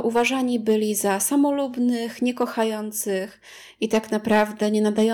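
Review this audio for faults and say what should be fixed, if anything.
Hard clipping hits the speech peaks at 0.07–0.27 s (about 4 dB over), 0.69–1.25 s and 2.41–2.63 s (about 2 dB), and 3.83–5.06 s (about 6 dB). Flattened tops add that crackly, fuzzy edge. Lower the gain before the converter so peaks keep headroom.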